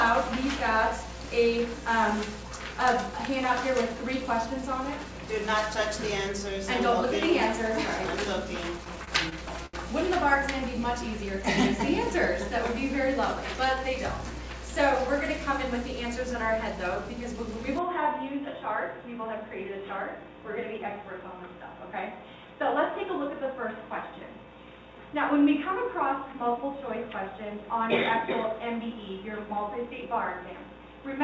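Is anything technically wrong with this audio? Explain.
Yes. From 8.78 to 9.75 s there are repeated stalls (stutter): six short late-packet gaps, the longest 72 ms, are filled by extending the previous sound, so the audio drags and hiccups.

From 17.79 s to the end the sound abruptly narrows, drops about 5 dB, and gains faint new noise. This is likely an input switched to a poorer device, with no silence at the change. Before the switch, the band reaches 8 kHz, which fits the G.722 call codec.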